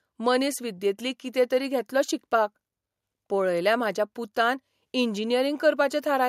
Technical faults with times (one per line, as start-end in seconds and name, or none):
none